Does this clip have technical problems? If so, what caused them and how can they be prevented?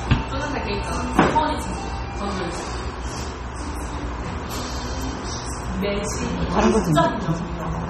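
Yes. The whole clip has a watery, swirly texture, with metallic chirps on the bright, noisy parts and smeared attacks. That's likely MP3 compression, and heavy at that: the damage fits a very low bitrate, somewhere around 32 kbps. The encoder runs short of bits, so weak frequency lines get zeroed and flicker on and off from frame to frame. That flicker is the swirl you hear. Nothing comes through above about 19.4 kHz either. To prevent it, keep a lossless master and, if you need MP3, encode at a much higher bitrate.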